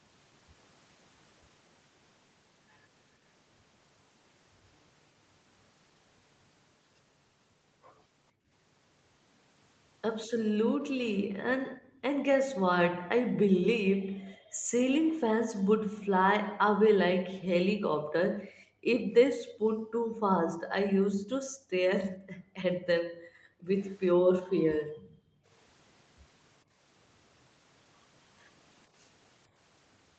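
Background gated by the echo canceller appears first at 8.32 to 8.51 s, again at 11.21 to 12.02 s, and then across a long stretch from 12.6 to 25.48 s. During each span the room sound underneath the speech sinks by as much as about 40 dB, falling to near silence, and comes back when the gate releases. The canceller was pulling the microphone down hard while far-end audio played, and in the last span about ten seconds of ambience is lost in bursts.

An echo leak follows at 24.76 to 25.19 s: a faint delayed copy of the speech trailing about 447 ms behind and sitting about 30 dB below it. The likely cause is a loudspeaker on the far side whose microphone picked up the call audio, with that side's echo canceller failing to strip all of it before sending it back. The return is a brief, low scrap rather than a sustained echo.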